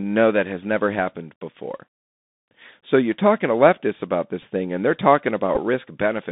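Throughout the speech, the Bluetooth CVSD headset codec confines the sound to roughly 150 Hz to 3.7 kHz, which fits 64 kbps CVSD. Its one-bit adaptive steps fall behind on loud, bright sounds, roughening sibilants and leaving a granular hiss beneath the voice. That hiss and overload grit set it apart from a clean telephone band-limit.

At 4.42 s, between "talking to leftists about" and "thing and they're", a Bluetooth headset packet repeated: about 7.5 ms of lost audio, which fits two packets, was filled by decoding the previous packet again. It is heard as a brief buzz near 267 Hz rather than a gap of silence.

From 5.55 to 5.59 s another Bluetooth headset packet repeat covers about 11.2 ms, which fits three repeated packets. The repeat every 3.75 ms makes a steady buzz near 267 Hz until good packets return.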